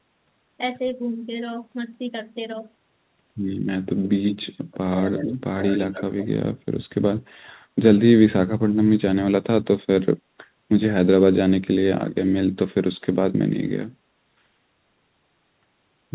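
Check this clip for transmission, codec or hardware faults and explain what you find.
One fault stands out in this speech clip, an echo leak, heard over a call path whose sound stops at 4 kHz, which fits narrowband G.711.

Echo leak, 4.03–4.75 s, 4.93–5.34 s and 5.58–6.27 s: a faint copy of the voice trails it by 129 ms, roughly 10 dB quieter. The likely cause is a far-end loudspeaker echo canceller letting residue through. The copy is a distinct repeat, unlike reverberation's smooth smear.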